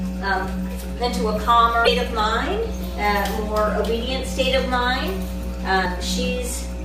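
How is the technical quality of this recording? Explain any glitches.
Technical quality is poor, with two distinct problems. A strong mains hum runs the whole length: a steady 60 Hz tone with low harmonics, sitting only a little below the wanted sound, likely from a ground loop or nearby transformer. Damaged data in a compressed stream appears at 1.84–1.88 s and 5.82–5.86 s. In each 40 ms span the decoder misreads corrupted frames and resynchronises, producing a brief chirp or squawk.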